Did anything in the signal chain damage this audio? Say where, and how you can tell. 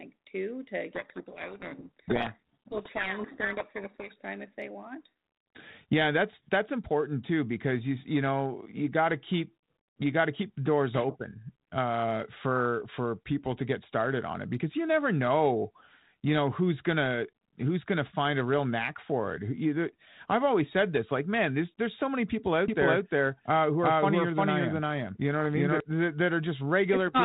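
Yes, two stages damaged it. The first is in the codec stage: a codec payload misread from 0.94 to 4.16 s, between "too to" and "time if they want". The speech is buried in harsh distortion. That fits a G.726 decoder reading each code word with its bits in the wrong order, so every sample is rebuilt from the wrong difference. On a spectrogram the harmonic striations dissolve into dense hash filling the band up to the 4 kHz ceiling. The waveform turns spiky and noise-like, then snaps back to clean 32 kbit/s G.726 with its usual light grain.

The second is a doubled audio track from 22.68 to 25.80 s, starting right after "there's so many people". A second copy of the full-band sound runs about 0.4 s behind the first at roughly the same level, with no decay or room colouring. It appears and disappears abruptly. The cause is likely a second capture path or an edit holding two out-of-step copies. 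The waveform shows each envelope repeated at a fixed offset. The spectrogram shows every syllable's pattern duplicated, shifted along the time axis.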